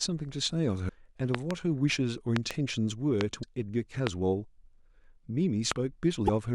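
A brief glitch in the speech at 0.85–0.90 s, repeated at 3.40–3.44 s and 6.25–6.29 s, is damaged data in a compressed stream: the decoder hits corrupted frames, loses sync and jumps to the next frame header. Loud pops sit on top of the continuing speech, peaking about 20 dB above it: double pops at 1.35–1.53 s and 2.36–2.53 s, single ones at 3.21–3.23 s, 4.07–4.09 s and 5.72–5.74 s. They are likely voltage steps from a plug, switch, static or driver glitch.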